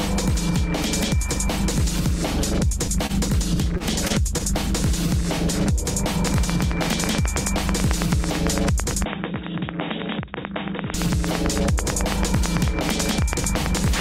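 At 3.06 to 3.11 s, a short stall from a late packet holds the sound for about 28 ms while the jitter buffer waits, with nothing lost. It sounds like a slightly buzzy hold. On a spectrogram the harmonics run flat and unchanged, and the waveform repeats one cycle. A second stall at 4.38 to 4.42 s stretches the sound by 18 ms in the same way.

Between these, short concealed packet loss occurs at 3.77 to 3.81 s and 4.07 to 4.12 s. Each time, 20 ms of audio never arrived and was replaced by about 22 to 25 ms of extrapolated sound. These are heard as brief smears or wobbles. A spectrogram shows short blurred patches where detail softens before the real signal resumes.

From 6.27 s to the end, a train of clicks ticks at a regular 9.06 per second, peaking about 15 dB above the sound and audible in pauses too. Interference is the likely cause. The waveform shows evenly spaced spikes of similar shape, and the spectrogram shows thin vertical lines across all frequencies.

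From 9.05 to 10.94 s, the input likely switched to a poorer device. The sound turns dull and boxy, about 5 dB quieter, with nothing above 3.8 kHz and a new noise floor roughly 50 dB down. There is no gap at the change. On a spectrogram the upper band is abruptly empty, like a ceiling.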